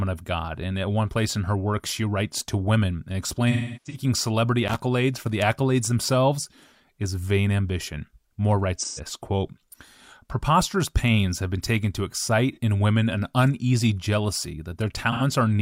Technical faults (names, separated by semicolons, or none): AAC frame loss with concealment; loose connector crackle